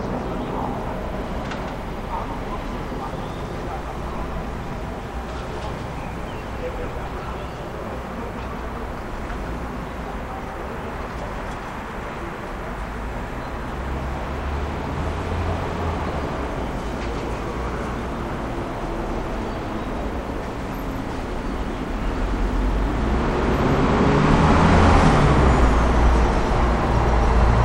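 A recording of everyday sounds with a doubled audio track running the whole way through: a second full-band copy trails by around 150 ms, a few dB quieter, with no decay or room colour, so every event smears into a flat slapback. It's likely a second capture path or a misaligned edit.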